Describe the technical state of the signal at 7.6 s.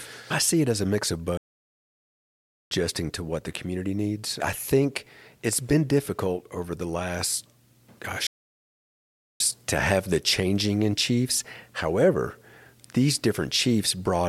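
At 7.6 s the speech signal is intact, with no fault audible at that moment.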